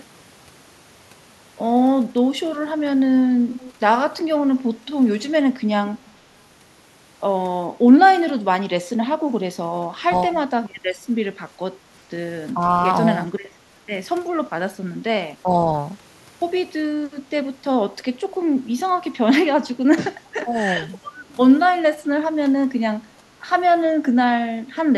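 At 3.6 to 3.73 s and again briefly at 4.86 to 4.91 s, a faint delayed copy of the speech surfaces about 391 ms behind the original and roughly 20 dB below it. This is an echo leak, likely from a far-end loudspeaker whose echo canceller let residual pickup through. Unlike room reverberation, which smears continuously onto the sound, this is a discrete scrap with a fixed lag.

Then come six short dips at 9.82 to 10.33, 12.54 to 12.6, 13.33 to 13.39, 15.43 to 15.68, 20.42 to 20.53 and 22.63 to 22.67 s. The speech sags by anywhere from a few dB to around 15 dB over spans of a tenth of a second or so. This is speech suppressed in double talk: the canceller likely mistook overlapping talk for echo and attenuated it. Unlike packet-loss dropouts, the voice is turned down by the canceller rather than lost in transit.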